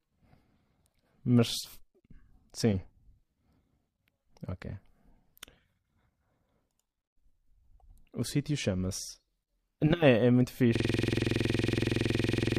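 From 10.76 s to the end, a system hang loop repeats one 46 ms buffer as a 21.5 Hz buzz: identical waveform blocks, regular vertical spectrogram stripes.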